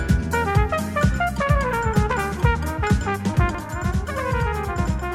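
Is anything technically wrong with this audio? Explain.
Yes. From 3.55 s to the end there is channel delay (doubling): one channel lags by 93 ms, which fits a 4096-sample buffer. Summed to mono, everything repeats once at equal level, unlike a fading room echo.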